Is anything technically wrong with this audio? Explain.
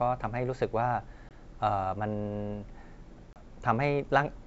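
Yes. The speech, carried over G.722 wideband coding, has packet loss on an ADPCM call at 1.29 to 1.32 s and 3.33 to 3.42 s. First a couple of packets (20 ms of audio), then a few (30 ms), were dropped and replaced by silence. The decoder's adaptive predictor and step size then drifted out of step with the sender's. Each hard-edged gap is followed by slightly distorted speech, settling within some tens of milliseconds.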